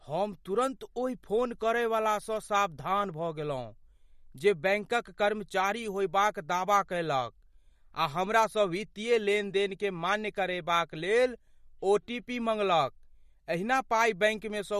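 From start to finish, the speech carries plainly audible MP3 compression. Nothing reaches above 14.4 kHz. The top of the treble is simply cut away. The encoder likely ran short of bits, which fits a bitrate near 48 kbps. Weak frequency lines switch on and off from frame to frame. That gives a watery, swirling texture. S sounds turn metallic and chirpy. Consonant attacks smear.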